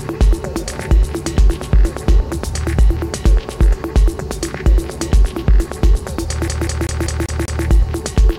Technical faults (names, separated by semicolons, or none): CD stuck on one turn